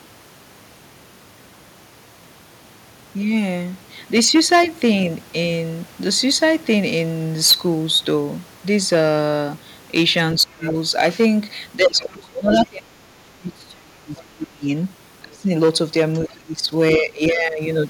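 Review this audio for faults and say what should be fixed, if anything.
Hard clipping runs through the whole clip: the speech is driven about 13 dB past what the chain can carry, so a small share of samples have their peaks sheared flat. This gives a harsh crackle on loud syllables. Unlike codec distortion, it follows level rather than frequency content. Setting input gain with real headroom before the first converter or fixed-point stage would prevent it.

Speech suppressed in double talk appears at 10.4–10.74 s, 11.76–14.69 s, 15.2–15.5 s, 16.25–16.71 s and 16.96–17.62 s. The talker dips sharply, by roughly 15 to 30 dB, with the longest hole lasting about three seconds. The likely cause is an echo canceller turning down the near talker while the far side also speaks. A canceller with better double-talk detection, or less aggressive residual suppression, would keep the talker audible.

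The other side's voice leaking through is heard at 10.6–10.71 s, 14.16–14.25 s and 16.13–16.19 s. Faint, short scraps of a second voice sit well below the talker, from roughly 15 down to 30 dB lower, and most likely come from loudspeaker echo that the canceller left behind. Better acoustic isolation, or a headset, would remove them.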